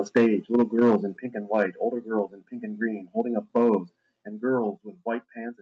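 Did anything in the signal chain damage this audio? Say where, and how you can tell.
Yes. At the converter stage, the microphone's input gain was set too high, which likely caused the microphone overload: peaks drove the converter past full scale and their tops were sliced flat. You can hear a harsh crackle on loud syllables at 0.16–0.27 s (about 8 dB over, with roughly a fifth of the samples clipped), 0.54–0.96 s (about 6 dB over), 1.54–1.63 s just after "in pink and", and 3.56–3.75 s just after "and green holding up".

In call processing, the software reacted to those hot peaks, most likely by stepping the microphone volume down on the device in single jumps. Both the sound and the background fall abruptly by about 3 dB at 0.17 s, in the middle of the first overload, about 6 dB at 1.17 s just before "pink and", about 6 dB at 4.23 s, and about 3 dB at 5.25 s. The steps are audible as sudden level drops rather than a smooth fade. 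The Opus call path itself passes the sound through a band that stops around 8 kHz.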